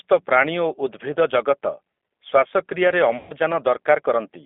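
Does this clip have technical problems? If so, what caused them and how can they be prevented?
Yes, two of them. The whole clip runs through a G.729 codec. The speech sits in a narrow telephone band of roughly 250 Hz to 3.5 kHz, with a plainly audible rough, slightly synthetic edge. That comes from the decoder rebuilding each 10 ms frame from a vocal tract filter, a pitch predictor and a handful of pulses instead of the actual waveform, which fits an 8 kbit/s G.729A stream. To avoid it, record or route the audio through a wideband codec such as Opus, or capture it locally before it hits the phone line.

Then there's VoIP packet loss concealed by the speech codec, from 3.17 to 3.33 s. About 130 ms of audio went missing, which points to something like thirteen lost frames in a row. The decoder papered over the gap by repeating its last pitch and filter at falling gain, so the sound smears into a buzzy tone or a coloured noise that fades, and because each frame builds on the previous one it stays weak or distorted just after the packets come back. 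Prevention is mostly network-side: prioritise voice traffic with QoS, use a wired connection, and give the jitter buffer enough depth or add redundancy/FEC.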